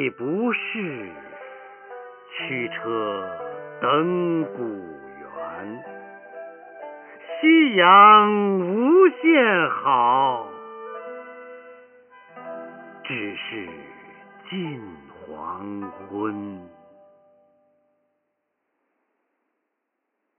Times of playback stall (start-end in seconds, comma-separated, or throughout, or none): none